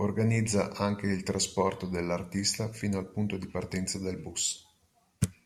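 No technical faults can be heard at any point in the speech, so there is nothing to describe in time order.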